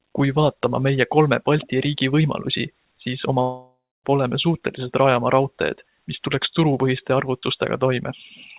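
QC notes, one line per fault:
3.42–4.06 s, long network dropout. The sound breaks off and the last sound is stretched into a fading buzz or hiss for about 0.6 s. Roughly 0.26 s of silence follows. About 0.62 s of audio never returns, likely from lost packets.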